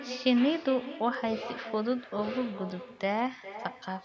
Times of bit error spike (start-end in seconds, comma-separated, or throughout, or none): 1.15, 2.70